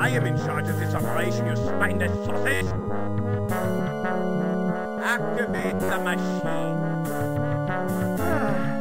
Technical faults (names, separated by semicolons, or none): robotic sound from repeated short buffers; compressed frames skipped